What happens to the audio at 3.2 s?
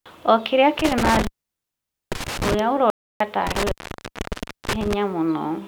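The speech cuts to total silence, with no room tone, from 2.90 to 3.20 s, where it resumes mid-flow: an audio dropout to silence, likely from the input being lost while zeros were recorded.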